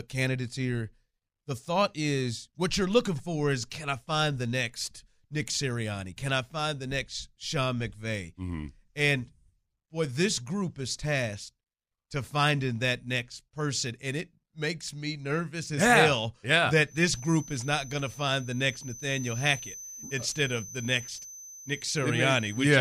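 Right after "as yeah hell yeah", at 16.82 s, a thin feedback whistle at 6.1 kHz comes in and holds to the end, sitting about 15 dB under the speech and swelling and fading slowly. It's likely a speaker-to-mic loop balanced right at the edge of feedback.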